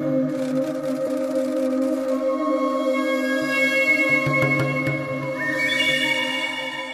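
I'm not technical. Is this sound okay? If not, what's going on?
No. From about 1.03 to 1.08 s there is a brief glitch, caused by damaged data in a compressed stream: part of the file was corrupted, so the player misread it.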